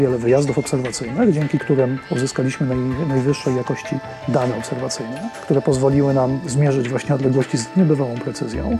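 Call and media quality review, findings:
No audible faults found.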